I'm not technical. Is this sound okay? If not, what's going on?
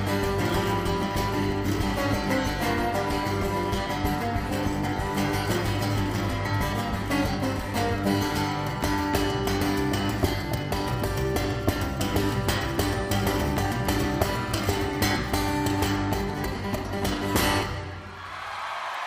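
Yes, it sounds fine.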